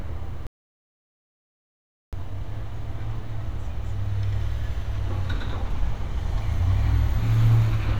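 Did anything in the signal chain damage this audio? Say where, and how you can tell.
Yes. An audio dropout to silence runs from 0.47 to 2.13 s: the sound cuts off mid-flow and resumes abruptly, with about 1.7 s of silence between. The likely cause is a lost input link or mute while recording continued. Unlike a noise gate, no room tone survives.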